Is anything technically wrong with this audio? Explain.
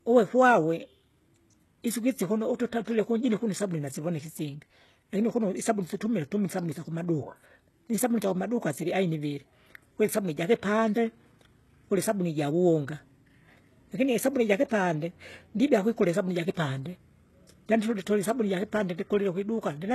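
Yes. HE-AAC compression is likely, throughout the speech. The codec keeps only the lower spectrum and rebuilds the treble by copying lower bands upward, and nothing reaches above 12.3 kHz. The damage is plainly audible: gritty, lispy s sounds whose highs don't line up harmonically, which fits a very low bitrate of around 16 kbps.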